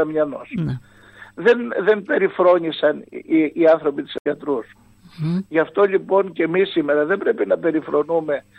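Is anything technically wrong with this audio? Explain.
Yes. Damaged data in the compressed stream at 4.17–4.26 s: corrupted bytes make the decoder misread frames and lose sync while it hunts for the next header, leaving a brief glitch.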